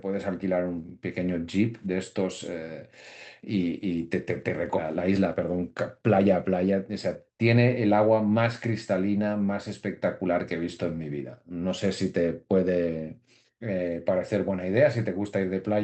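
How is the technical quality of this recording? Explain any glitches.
There are two connected glitches in the speech, both around the five-second mark, riding on a call-codec path whose top end stops near 8 kHz, which fits Opus at around 48 kbps.

The first is a skip ahead at 4.77 s. Roughly a second of speech just isn't there. That chunk was dropped, either in transit or flushed by an overflowing jitter buffer, while later audio was already queued. Playback jumps straight to what came next, with no fill. The two sides are butted together, so it sounds like an abrupt cut rather than a pause.

Right after that comes a jitter buffer speed-up from 4.87 to 7.30 s. The buffer was holding more than its target, so the receiver trimmed it by snipping out tiny pitch-period-sized pieces over and over, about a fifth of a second in total. Speech runs at roughly 108% speed with the pitch unchanged. 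For those couple of seconds the talker sounds a bit rushed, as if hurrying to catch up.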